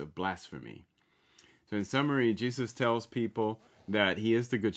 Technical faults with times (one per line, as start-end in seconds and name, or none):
none